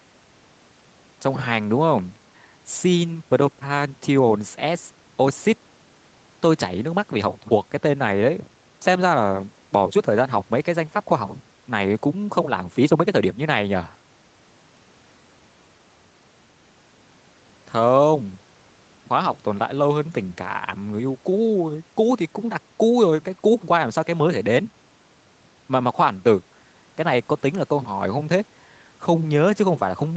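No technical faults are audible.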